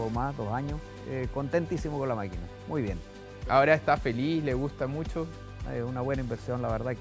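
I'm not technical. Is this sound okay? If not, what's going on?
Yes, this sound is okay, and there's nothing going on that needs fixing.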